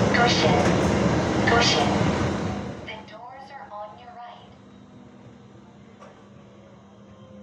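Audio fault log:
2.23–3.18 s, zipper noise: the level drops by about 25 dB in hard 1 dB steps, around 40 a second, with no smoothing between them. Each sudden gain jump puts a small discontinuity in the waveform, so the fade carries a fast ticking or zipping texture. On the waveform the envelope descends as a staircase. A spectrogram shows a row of thin vertical broadband lines at regular spacing across the fade.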